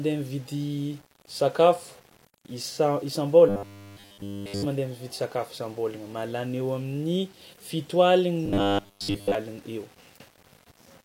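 Across the whole speech clip there is a grainy distortion that tracks the level of the sound, likely from low bit depth without dither. The grit fits about 8 bits with plain rounding: the error sits roughly 30 dB below the signal and moves with it rather than forming a steady hiss. Quiet passages turn rough and sputter between adjacent steps, since no dither was added to break up the error.

From 3.49 to 4.66 s the speech turns into a rigid, metallic buzz at 100 Hz. This is robotic sound from repeated short buffers, likely caused by audio arriving too slowly so that the last 10 ms is played over and over while new material is skipped. The loop length fixes the 100 Hz pitch. In this span essentially all of the audio is repeats.

The same robotic sound returns from 8.46 to 9.35 s, again buzzing at 100 Hz. Here most of the audio, but not all, is repeated buffers, so fragments of the underlying speech break through the buzz.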